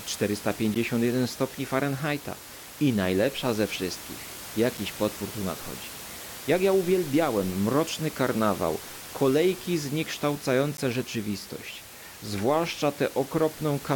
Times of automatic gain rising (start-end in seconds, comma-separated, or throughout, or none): none